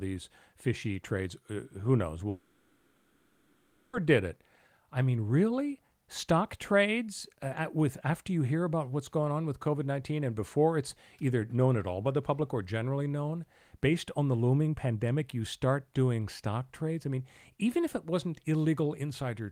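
At 2.29 s the speech cuts out and doesn't return until 3.95 s, a gap of about 1.64 s. What fills that gap is a buzzy, hissy continuation of the last sound that fades, rather than true silence. That's the signature of a long network dropout: most likely the packets simply stopped arriving, the receiver papered over the hole, and when the audio comes back that 1.64 s of speech is gone for good.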